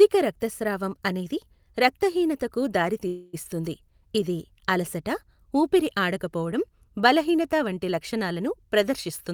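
A call audio freeze runs from 3.07 to 3.35 s, right after "రక్తస్రావం అనేది రక్తహీనతకు". Packets were likely held up in transit, draining the jitter buffer, so the receiver stretched the last sound into a fading buzz or hiss for about 0.26 s. Nothing is lost, but the speech resumes that much later.

A jitter buffer speed-up follows from 9.07 to 9.34 s, after "ఆడకపోవడం బలహీనత వంటి లక్షణాలను". With too much audio queued, the receiver cut short pitch-period slices, roughly 50 ms in total, so the speech plays at about 115% speed with unchanged pitch and sounds hurried.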